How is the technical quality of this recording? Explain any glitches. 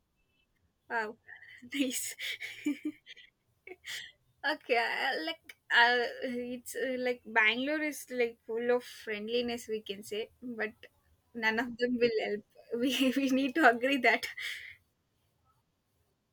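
The speech recording has no technical glitches, with the signal running continuously and no interruptions or disturbances to explain.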